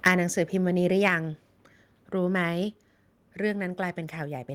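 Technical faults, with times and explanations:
0.06–0.10 s, microphone overload: The loudest peaks at the very start are flattened at their tops. This gives a short, harsh, crackling edge to the sound. The level reads about 8 dB past the limit, and roughly a tenth of the samples in this stretch are cut off. The likely cause is a microphone input set too high, so the converter runs out of headroom and squares off the waveform.
0.08 s, 1.08 s and 2.64 s, microphone volume stepped down: At each of these moments the whole signal drops in one sudden step, and the background noise drops with it. The first two drops are about 4 dB each, and the last is about 2 dB. The first one lands during the distorted peak. This is likely the call software reacting to the overload by cutting the device's input volume in stages.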